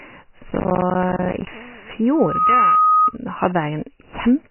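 Speech runs through the whole clip with heavy codec damage, most likely from MP3 compression at a very low bitrate, around 16 kbps. Starved of bits, the encoder has dropped weak frequency lines that flicker in and out from frame to frame, and it has removed everything above 3 kHz. The result is a watery, swirling texture, dulled consonants, smeared attacks and a muffled top end across the entire recording. From 0.50 to 1.54 s, processor overload crackle takes over. The system repeatedly failed to finish its small audio buffers on time, and each miss left a short hole of silence with hard edges. The gaps fit buffers of roughly 10 ms, and there are about thirty of them packed into that stretch. Together they produce a gritty tearing that rides on the speech and stops once the load eases. From 2.15 to 3.12 s, a loudspeaker feedback squeal appears. A microphone picked up the loudspeaker it was feeding, and at 1.2 kHz the loop gain rose above one, so that frequency fed on itself. 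It is heard as a single tone that swells over about a third of a second and settles at about 5 dB above the speech, holding until the loop is broken at 3.12 s.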